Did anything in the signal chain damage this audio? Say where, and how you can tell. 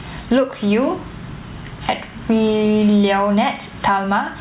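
Yes: gain pumping runs through the whole speech clip, likely from input gain set far too high with a fast limiter in call processing clamping each loud syllable. The room noise sits about 40 dB down, and the gain swings by roughly 15 dB.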